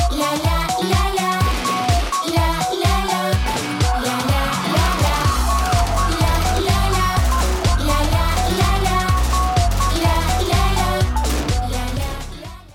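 Nothing goes wrong anywhere in the audio, so there's no technical fault to pick out here at all.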